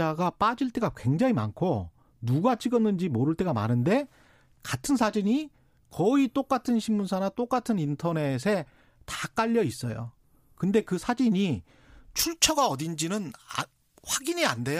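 Pre-emphasis left on, from 12.19 s to the end of the speech at 14.79 s. The treble was lifted for transmission and the matching de-emphasis was never applied, so highs stay raised by about 11 dB at 10 kHz relative to 1 kHz, a tilt that fits the J.17 curve. The speech turns thin and glassy, with sharp, hissing sibilants and little body beneath them.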